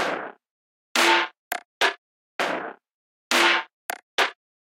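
A short recording of everyday sounds, with no technical fault to be heard anywhere in it. There is nothing to point to, so no times or causes apply.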